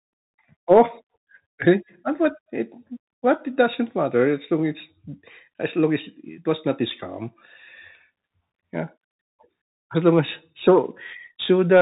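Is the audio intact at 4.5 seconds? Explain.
No. At 4.5 seconds, as throughout the clip, the speech sounds muffled and scratchy over a granular hiss. This comes from the Bluetooth CVSD headset codec, which codes one bit per sample with adaptive steps and passes nothing above 3.8 kHz.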